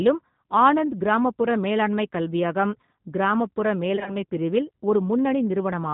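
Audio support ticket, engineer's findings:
G.729 codec throughout: band capped near 4 kHz, speech rough and a bit synthetic, plainly audible. Sounds like the 8 kbit/s G.729 family, rebuilding speech from a vocal-tract filter, pitch predictor and a few pulses per frame.

VoIP packet loss concealed by the speech codec, 3.96 to 4.16 s, right after "கிராமப்புற மேலாண்மைக் கல்வியகம் கிராமப்புற": smeared, fading stretch. About 70 ms missing over 100 ms, longest gap 30 ms, fitting roughly seven 10 ms frames. Decoder extrapolating, slow recovery.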